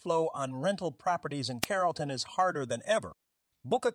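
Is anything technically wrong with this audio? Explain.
Yes. At 1.62 to 1.66 s, just after "on rental properties in", there is a wireless microphone noise hit: the FM radio link fades as reflected signals cancel, receiver noise surges, and a brief burst of static sounds for about 40 ms.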